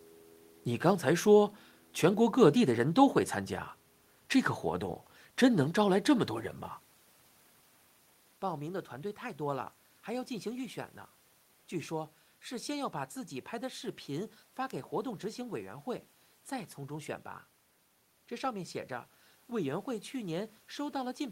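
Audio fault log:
No technical faults detected.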